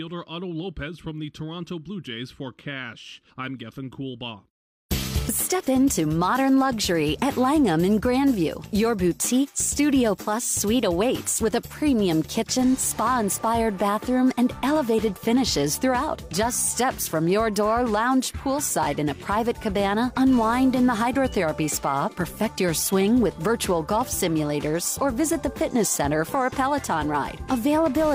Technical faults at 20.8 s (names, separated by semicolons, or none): none